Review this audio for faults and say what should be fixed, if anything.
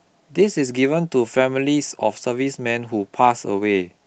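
Nothing stood out on listening to this speech recording, so there is nothing here that needs fixing.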